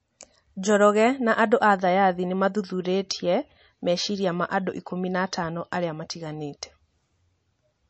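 Throughout, the speech has nothing above 8 kHz and a watery, swirling texture on s sounds, likely from MP3 compression near 35 kbps, unlike a plain low-pass filter.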